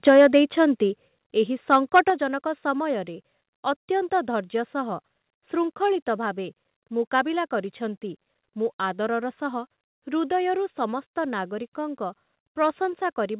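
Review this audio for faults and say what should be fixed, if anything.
Microphone overload: from 0.07 to 0.37 s and again from 1.72 to 2.00 s, the loudest peaks take on a harsh, crackly edge with flattened tops. This is likely the microphone input driven into the converter's ceiling, by about 6 dB in the first stretch and about 4 dB in the second. That cuts off a few percent of the waveform's samples in the first passage and a smaller share in the second. Set the input gain so peaks stay well below full scale, leaving several dB of headroom.

Microphone volume stepped down: the whole signal, including the background, drops abruptly in level at 0.09 s by about 3 dB, at 1.08 s by about 5 dB, and at 2.1 s by about 4 dB. Two of the steps fall during or just after the distorted peaks, which points to the call software's automatic gain control likely reacting to the overload by pulling the device input down in single jumps. 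Fixing the input level at a safe setting and disabling automatic microphone gain adjustment prevents these level jumps.

Across the clip the audio stops at 4 kHz, consistent with a narrowband G.711 call path.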